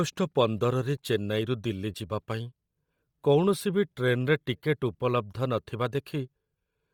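Bluetooth LC3 compression, throughout: the speech has a breathy, grainy edge, and noise-like fill replaces its upper band. This is likely the LE Audio transform codec starved of bits. The heavy damage fits about 32 kbps with 10 ms frames.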